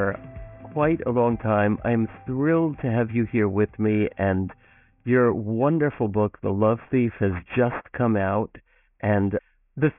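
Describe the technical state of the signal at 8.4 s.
Aliasing is present at 8.4 s, as it is across the whole clip. The audio was brought down to a much lower sample rate without an anti-aliasing filter first; the band edge sits near 3 kHz, which fits a drop from 48 kHz to 6 kHz. Content above 3 kHz folds back below it as unrelated, inharmonic tones, roughly 20 dB under the signal. High-frequency detail sounds gritty and metallic, and the spectrum runs hard up to 3 kHz.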